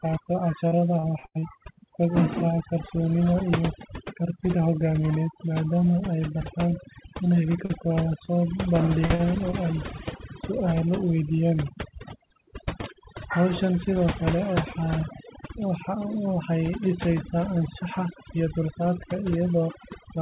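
Throughout the clip the background falls to an unnatural near-silence dotted with twinkling specks. This is overdone noise removal. The noise reducer was set too hard, so every narrow frequency band that came close to its noise estimate was pushed down or switched off. Quieter parts of the speech were caught along with the hiss, and the bands flicking on and off leave those isolated specks behind.

From 0.68 to 1.44 s the speech turns choppy, with pieces audibly missing. This is repeated packet loss. Holes came one after another across this stretch, the longest about 98 ms. The receiver patched each one by extending the last sound before the next hole arrived, so about a third of that span is filled-in audio rather than the real signal.

Later there are six brief smears or wobbles at 7.65, 8.25, 9.06, 9.15, 9.51 and 10.17 s. Each is a short concealed packet loss of 20 to 40 ms. At those points audio failed to reach the decoder in time, and the gap was covered by continuing the preceding pitch or shaped noise before blending back into the real signal. 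At 9.51 s the patch also adds roughly 7 ms of extra audio. All of this sits on a call path with nothing above 4 kHz.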